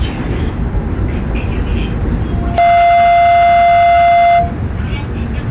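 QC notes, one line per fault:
2.31–4.58 s, loudspeaker feedback squeal: A 693 Hz tone swells over roughly 0.7 s to about 10 dB above the sound. The microphone is re-amplifying its own loudspeaker, band-limited below 4 kHz by the call codec.
2.58 s, skip ahead: Playback jumps forward with no gap. Around 0.4 s of sound is dropped and the two sides are joined directly, so the receive delay shrinks.
2.67–3.37 s, jitter buffer speed-up: The sound runs at 113% speed without a pitch change. The buffer trims short pitch-period pieces, about a tenth of a second in total, to reduce the delay.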